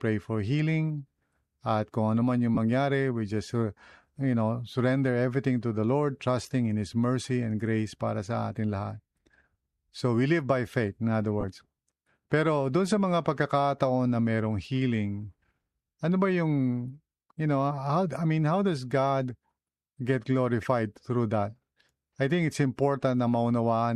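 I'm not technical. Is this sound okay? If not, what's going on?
No. At 2.55 to 2.57 s, 6.43 to 6.51 s and 11.40 to 11.44 s the speech briefly turns into a hissy smear. These are lost LE Audio frames: Bluetooth dropped bits of sound, and the receiving device filled the gaps with noisy guesses.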